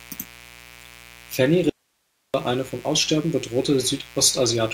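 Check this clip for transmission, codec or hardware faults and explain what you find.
Two faults are audible in this speech clip: a constant buzz underneath everything, and one abrupt gap where the speech vanishes.

Mains buzz runs through the whole clip. Sharp switching spikes from a dimmer, rectifier or poorly shielded lead ride on the 60 Hz supply, firing twice per cycle and spraying harmonics up into the kilohertz range. The result is a steady, raspy buzz sitting roughly 25 dB below the speech.

An audio dropout to a faint residue runs from 1.70 s to 2.34 s, about 0.64 s of lost signal. The source was likely cut off upstream while everything after the break stayed live. The speech stops and restarts abruptly, and the gap holds only hiss, roughly 50 dB down.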